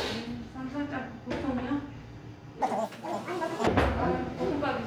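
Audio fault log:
2.62–3.67 s, audio read two samples at a time (double speed): the sound suddenly races at twice its speed and jumps a full octave higher. Each pair of samples is taken as one frame, as though the stream were two channels or samples twice as wide, so playback doubles and high frequencies fold back.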